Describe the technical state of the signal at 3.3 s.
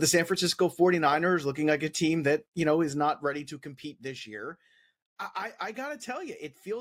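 At 3.3 s there is zipper noise, from 2.88 to 3.69 s: a roughly 15 dB fade applied in unsmoothed steps, about 30 per second, ticking steadily only while the level moves, unlike random crackle.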